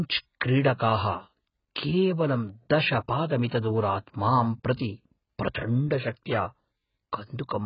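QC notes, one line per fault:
Throughout: AAC compression. The likely cause is an AAC-LC encoder starved of bits. The heavy damage points to a very low bitrate, around 12 kbps. The encoder has dropped everything above 5.1 kHz and quantised the remaining spectrum coarsely against its hearing model. The speech sounds dull and muffled, with no air or crisp sibilance, and the thinly coded bands leave a smeared, warbling texture on sustained sounds.
3.48–3.51 s: pre-echo, just after "केवलं दश". A sharp attack landed late in a transform block, and the codec spread the quantisation noise sized for that loud onset across the whole block, including the quiet stretch before it. About 34 ms of hiss runs ahead of the attack, so the onset sounds softened and smeared rather than crisp.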